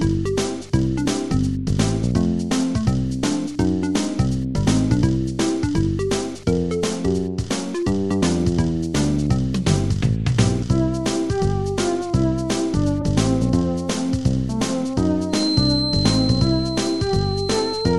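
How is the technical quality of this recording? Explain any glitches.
The recording has two kinds of fault: three short skips in the compressed stream and a whistle that stays until the end.

Compressed frames skipped at 6.99 to 7.06 s, at 10.61 s, and at 13.01 to 13.03 s: whole coded frames never reach the output, so the audio leaps forward by about 50 ms each time.

Feedback whistle from 15.27 s to the end: a thin, steady tone at 4.1 kHz sits about 10 dB below the sound, swelling and fading slowly in level. Its likely cause is a loudspeaker-to-microphone loop held just short of runaway, sustaining that single frequency.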